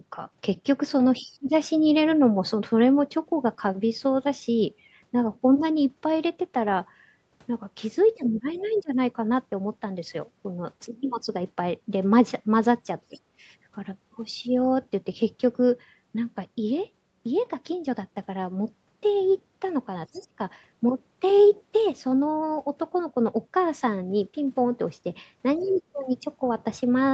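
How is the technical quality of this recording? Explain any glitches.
The recording is speech carried over a call, band-limited to about 8 kHz by the call's Opus path. It has two recurring glitches that appear together five times.

Speech suppressed in double talk: the voice sinks at 1.19–1.54 s (by about 30 dB), 8.15–8.98 s (about 20 dB), 13.08–13.17 s and 20.12–20.38 s (about 25 dB each), and 25.58–25.95 s (only about 5 dB). Both ends were likely talking at once, so the echo canceller, unable to separate them, pulled everything down.

Other side's voice leaking through: brief, faint scraps of a second voice surface at 1.31–1.35 s, 8.69–8.82 s, 13.16–13.20 s, 20.15–20.20 s and 25.60–25.69 s, about 30 dB below the main speech. This is likely loudspeaker playback that the echo canceller did not fully remove from the microphone.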